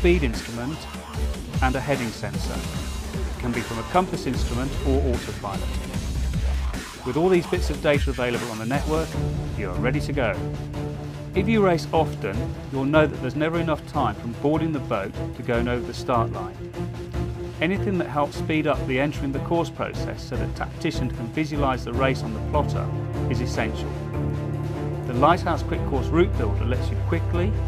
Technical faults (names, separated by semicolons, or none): none